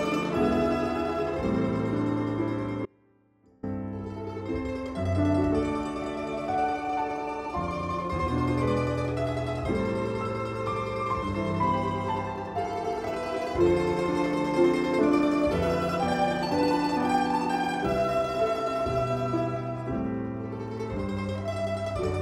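An audio dropout to a faint residue runs from 2.86 to 3.63 s. For 0.77 s the sound collapses to a faint leak about 30 dB below its normal level, likely a brief signal loss with the path left live. Its abrupt cut and return set it apart from a pause or fade.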